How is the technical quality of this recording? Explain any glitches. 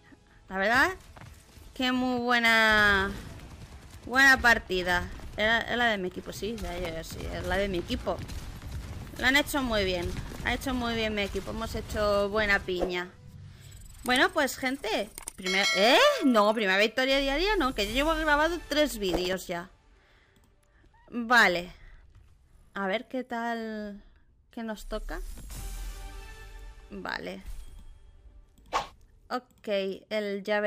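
The recording has two short glitches. Gritty, tearing crackle rides over the sound from 6.78 to 7.28 s and from 19.09 to 19.46 s. This is processor overload crackle: the processor repeatedly missed deadlines on tiny buffers of roughly a millisecond and a half, replaying stale audio with hard edges each time.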